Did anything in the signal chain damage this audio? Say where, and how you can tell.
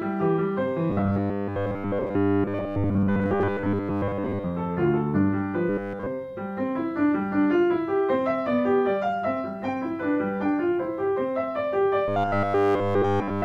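Yes. Robotic sound from repeated short buffers appears at 0.9–4.46 s, 5.69–6.07 s and 12.08–13.44 s. A fixed 100 Hz metallic buzz covers most of the first stretch and all of the others. The likely cause is a buffer stage repeating its last 10 ms when data arrived late.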